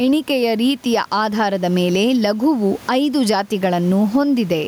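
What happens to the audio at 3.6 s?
At 3.6 s, as throughout the clip, there is gain pumping: likely excessive input gain with a fast limiter clamping each loud sound, so the gain swings by around 10 dB and the sound is squashed, with loud and soft parts closer in level.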